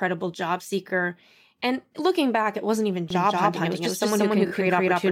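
At 0.88 to 0.91 s, repeated frames cause a brief stutter. One 23.2 ms compressed frame plays twice. A click can mark the seam. The clip gains 23.2 ms.

From 3.10 s, just after "back it wasn't even", a doubled audio track appears. A second copy of the speech runs about a fifth of a second behind. It is roughly as loud as the original. It starts abruptly, has no decay or room colour, and lasts to the end. A second, slower capture path is the likely cause.

At 4.46 to 4.51 s, repeated frames strike again. A 23.2 ms frame plays three times in a row. The result is a quick double stutter. The clip gains 46.4 ms.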